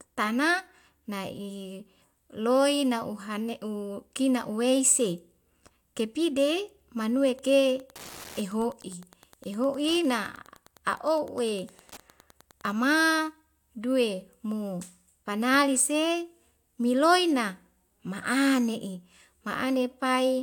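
Speech recording with Wi-Fi interference from 7.26 to 12.73 s: a steady ticking about 25 dB below the speech, repeating every 102.4 ms, roughly ten ticks per second. A nearby Wi-Fi radio's beacon bursts are being rectified by the audio circuitry.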